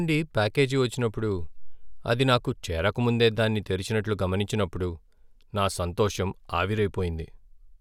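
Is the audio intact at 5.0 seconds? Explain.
Yes, the speech is intact at 5.0 seconds, with no dropout, click, distortion or other fault at that point.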